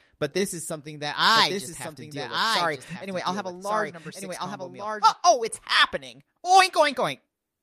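From 1.36 to 5.14 s there's a doubled audio track: a second full-band copy of the sound trails about a second behind, roughly 5 dB quieter, bone dry, and it cuts in and out abruptly. Likely a second capture path running late.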